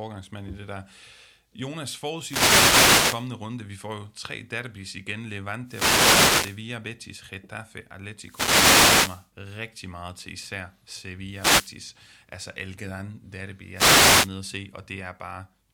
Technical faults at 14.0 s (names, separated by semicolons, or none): wireless microphone noise hit